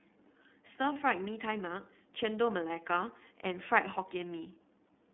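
From start to finish the speech sounds boxed-in and slightly rough, with a faintly synthetic, grainy texture and no air or sibilant sparkle. The audible band sits between about 200 Hz and 3.6 kHz. This is the iLBC codec at work. It rebuilds the excitation of each 30 ms block independently on a narrowband line, and the plainly audible coding damage is consistent with its 13.33 kbps mode.

At 0.93 s a brief held, buzzy vowel-like sound replaces the speech until about 0.97 s, and then the voice snaps straight back to normal. These are lost iLBC frames. The decoder filled the gap by repeating the last pitch cycle blended with noise. The roughly 30 ms patch fits a single missing frame, and because iLBC frames stand alone, recovery is immediate.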